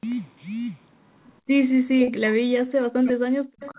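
From 1.75 s to the end, the speech keeps ducking, in places by around 40 dB, for about a second and a half in total. It sounds like the other side talked over it, so this is likely speech suppressed in double talk, with the echo canceller pulling both down.

Inside that stretch, from 2.04 to 2.20 s, there's a short stall from a late packet. The jitter buffer ran dry and the last sound got held for about 28 ms until the packet arrived. Nothing is lost, but you hear a brief smeared hang.

Right near the end, from 3.63 to 3.71 s, a faint delayed copy of the speech comes back about 147 ms behind and roughly 20 dB down. That's likely an echo leak from a loudspeaker on the far end that the canceller didn't fully remove. It's all riding on a 4 kHz-limited call path that fits G.711 A-law.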